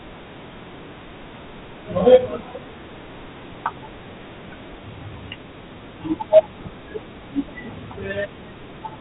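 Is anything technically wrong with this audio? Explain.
Yes. Throughout, the speech sounds gritty and dull, with hiss riding on it and nothing above 3.9 kHz. That is Dialogic VOX ADPCM: coarse 4-bit steps, consistent with 32 kbps at 8,000 samples a second.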